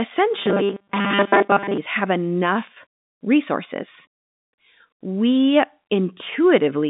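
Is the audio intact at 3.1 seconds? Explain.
Yes, the audio at 3.1 seconds is intact, with nothing interrupting or damaging the speech beyond the narrow telephone band of its G.711 coding.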